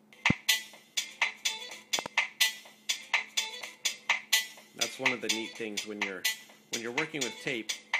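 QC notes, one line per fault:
0.30–0.33 s, loud pop: a single sharp pop lasting about 23 ms, peaking around 20 dB above the surrounding sound, which continues underneath. Likely a sudden voltage step or pulse from a plug, switch, static discharge or driver glitch, shaped by the downstream circuitry.
1.99–2.08 s, loud pop: two pops in quick succession within about 90 ms, peaking around 15 dB above the sound, which carries on beneath them. This points to the same kind of electrical transient, likely occurring twice.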